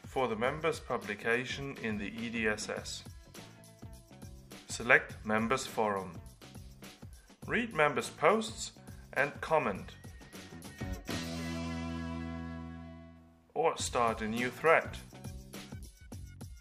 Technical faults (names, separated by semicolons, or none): bit error spike